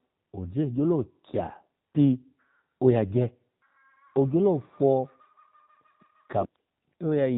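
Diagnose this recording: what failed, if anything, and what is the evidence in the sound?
The speech path went through an AMR narrowband mobile codec at a low mode, consistent with about 7.4 kbps. Throughout, nothing above 4 kHz survives, and the voice has a plainly buzzy, synthetic quality from the sparse pulse excitation of the vocal-tract model.

AMR bit errors struck from 6.40 to 6.60 s. A weak radio link corrupted several percent of the less protected bits while the checksum still passed, so those frames were decoded with misplaced pulses and faulty gains. The voice keeps its pitch and level but turns hoarse, scratchy and gargly there.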